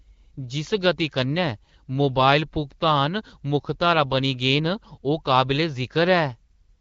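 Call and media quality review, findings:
Nothing to flag here: the speech comes across as ordinary HD Voice audio through the AMR wideband codec at 12.65 kbit/s, with only the light coloration you'd expect from that rate.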